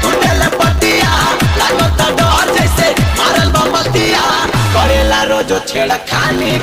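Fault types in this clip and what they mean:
Block size mismatch (truncated): one stage hands over longer blocks than the next stage reads in, so the tail of every block gets thrown away. In this clip that shows up as a steady 100 Hz buzz, which is the block rate, running through the whole thing, and the audio plays 1.16 times faster than it should. The pattern fits 512-sample blocks being cut short each time, while the timbre itself holds up.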